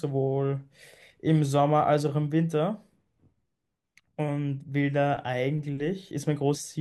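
At 6.55 s, compressed frames are skipped. Roughly 150 ms of speech never plays, so it jumps ahead.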